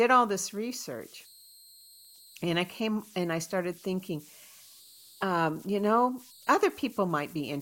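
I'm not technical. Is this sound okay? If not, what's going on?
No. Throughout the speech there are converter idle tones: a steady high whistle near 4 kHz with grainy noise under quiet passages. The recording converter was fed no masking noise, so at low levels it fell into repeating patterns that produce that tone.

From 0.10 s to 7.60 s there are clock slip clicks, a soft rattle of ticks about twenty times per second. Each tick is one sample dropped or repeated, most likely because two devices ran on separate, slightly mismatched clocks.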